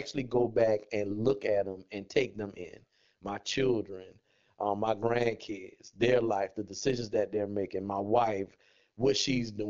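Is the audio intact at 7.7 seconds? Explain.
No. At 7.7 seconds, as throughout the clip, overlap-add ripple is present: frames were rejoined with an overlap whose gains don't sum evenly, so the level dips by about 11 dB roughly a hundred times a second, giving a metallic buzz over the speech.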